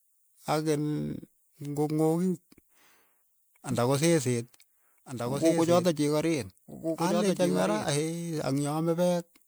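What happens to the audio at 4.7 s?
A second copy of the audio was likely mixed in, perhaps from a slower capture path or a misaligned edit. From 3.71 s to 7.91 s it trails the original by about a second and a half, roughly 5 dB quieter, dry and full-band, starting and stopping abruptly. This is a doubled audio track.

Underneath, the sound carries generation loss throughout: likely repeated decoding and re-encoding through MP3 at 128 kbit/s, around four passes, each quantising on a shifted frame grid. The artefacts stack into a swirly, hollow, smeared tone with blurred attacks.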